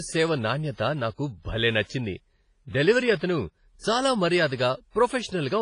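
Throughout the speech, heavy transform-codec damage is audible, likely WMA compression. Quantisation noise smears over tens of milliseconds, giving a ringing, washy texture with hiss that rises and falls with the signal. Nothing remains above 10.4 kHz, which fits a low bitrate near 24 kbps.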